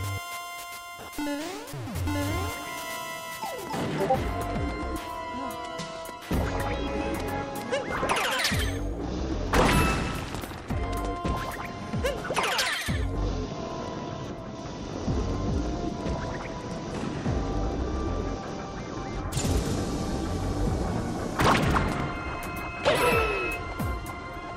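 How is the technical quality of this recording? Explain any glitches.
The recording has one clear fault near the end. From 22.12 to 23.62 s there is loudspeaker feedback squeal at 2.6 kHz. A microphone re-amplifies its own loudspeaker, and the gain around that loop exceeds one at this frequency. The tone swells over about a second and a half until it is roughly as loud as the sound itself. On a spectrogram it appears as a single bright horizontal line that thickens and brightens. On the waveform the envelope grows steadily.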